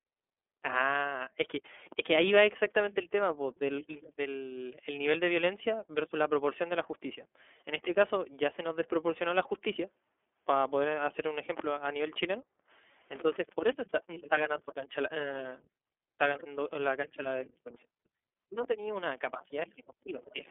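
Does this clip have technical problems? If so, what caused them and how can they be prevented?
Yes. Throughout the speech, the sound is narrow and boxy, with nothing above about 3.6 kHz and the low end thinned below roughly 300 Hz. Voiced sounds have a plainly audible rough, slightly synthetic grain. This is the iLBC codec at work. Each 30 ms frame's excitation is coded on its own, without borrowing from the previous frame, and the reduced detail per frame points to the 13.33 kbps mode. To prevent it, record or transmit through a wideband codec at a higher bitrate instead of a narrowband telephone link.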